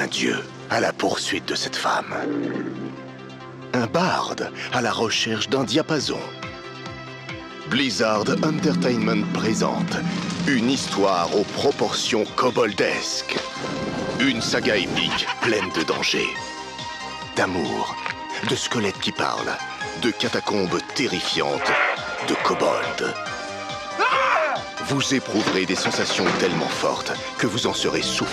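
No technical faults can be heard anywhere in this recording.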